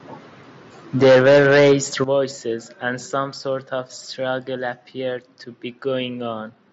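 Right at 1.02 s the loud stretch starts crackling and stays harsh through 1.74 s. That's microphone overload: the peaks push about 10 dB past what the converter can take, so their tops get sheared flat, and roughly a fifth of the samples in that window are clipped. The cause is likely an input gain set too hot. There's a much briefer repeat from 2.01 to 2.03 s, only about 1 dB over with a small fraction clipped, so it's more of a quick gritty tick than a sustained rasp.

Tangled up with those, you can hear the microphone volume stepped down three times, each one a sudden drop in both the sound and the background. The first comes at 1.03 s, about 3 dB, barely into that first overload. The big one is at 2.04 s, about 10 dB, right after the second clip, so the level clearly falls away. A last small trim of about 2 dB lands at 3.06 s. This is likely the call software reacting to the clipping by cutting the device's input gain in single jumps. 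Everything sits under the mSBC headset band, with nothing above about 7.7 kHz.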